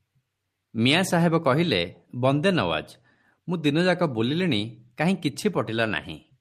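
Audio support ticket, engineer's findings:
Listened through the speech recording and nothing stood out as a problem.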